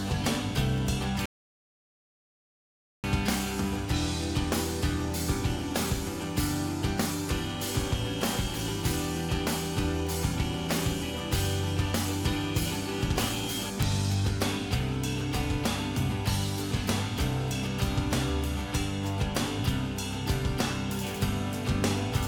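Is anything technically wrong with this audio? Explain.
Yes, there are two faults.

From 0.78 s to 21.34 s, sharp ticks of uneven strength recur about every 1.5 s, around fifteen in all. These are word clock ticks: the receiving device runs on its own clock, roughly 20 ppm off the sender's, and each slip drops or repeats a single sample.

At 1.26 s the audio cuts to silence and resumes at 3.04 s exactly where it stopped. This is a rebuffering stall. The player ran out of downloaded audio and waited for more, adding 1.78 s without losing any content.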